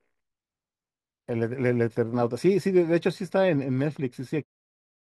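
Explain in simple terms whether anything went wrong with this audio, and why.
Nothing went wrong; the ending just fades gently away.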